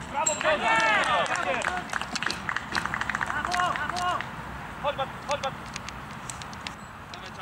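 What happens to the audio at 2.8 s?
At 2.8 s the audio has just become a doubled audio track. From 2.72 s to 6.74 s a second full-band copy plays about half a second behind the first. It is roughly as loud as the original. It has no decay and no room colour, so it sounds like a clean repeat, not an echo. It starts and stops abruptly at those times. The likely cause is a second capture through a slower path, or an edit holding two offset copies.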